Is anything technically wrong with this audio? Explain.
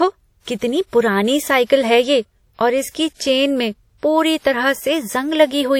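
Yes. Throughout the speech there is audible transform-codec damage, likely WMA compression. Long blocks smear quantisation noise around each sound, giving a ringing, washy texture with hiss that breathes with the signal. The band stopping near 17.8 kHz and the level of damage fit a bitrate near 48 kbps. Broadband background noise would stay steady instead of tracking the signal.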